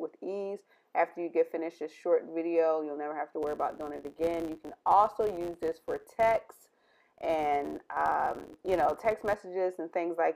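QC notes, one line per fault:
3.42–9.43 s, filter restarted on every block: the filter state resets at each block boundary, producing a 100 Hz tick-buzz that tracks the sound's level, consistent with 10 ms blocks.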